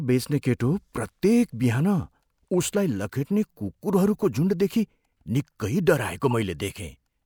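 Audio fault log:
6.31–6.33 s: corrupt frame decoded. A short glitch cuts into the speech. Flipped bits in a few compressed frames were decoded anyway. Misread codes and wrong gains put energy at false frequencies, peaking around -20 dBFS, for just those frames.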